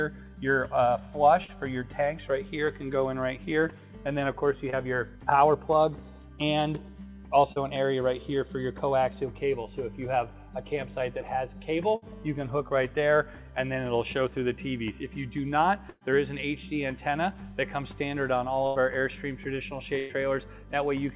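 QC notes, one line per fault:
1.44 s, 4.70 s, 7.52 s, short concealed packet loss: tiny gaps of about 40, 20 and 40 ms where packets didn't arrive in time. The decoder papered over each by stretching the previous sound and crossfading back, so you get a quick smear or wobble, and a short sound can get swallowed.
11.96–12.04 s, 15.90–16.03 s, 18.67–18.77 s, 19.99–20.11 s, burst of packet loss: longer holes of roughly 60, 120, 80 and 100 ms. The receiver kept extending the last sound and fading it down, which gives a held buzz or dying hiss, and at 15.9 s the fade bottoms out into a brief silence of about 10 ms. Playback then jumps ahead with that stretch gone. The dull, band-limited character under all of this, with nothing above 4 kHz, fits a G.711 narrowband call path.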